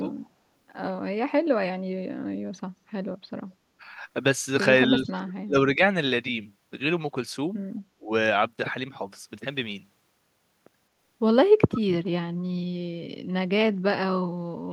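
Speech suppressed in double talk dips the speech at 0.00–0.14 s (about 10 dB), 5.00–5.56 s (about 30 dB), 5.76–5.81 s (only a few dB), 7.95–8.11 s and 14.65–14.73 s (both about 30 dB). It is likely an echo canceller mistaking overlapping talk for echo. The waveform envelope sags or nearly vanishes, and the spectrogram fades across all bands. At 11.73–11.81 s an echo leak adds a faint copy about 15 dB down, delayed 215 ms. It is likely loudspeaker pickup escaping cancellation, and shows as a weak, shifted repeat of earlier spectral patterns.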